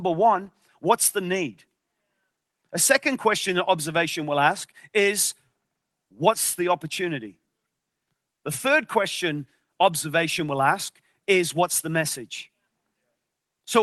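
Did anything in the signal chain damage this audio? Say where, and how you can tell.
No, nothing damaged it.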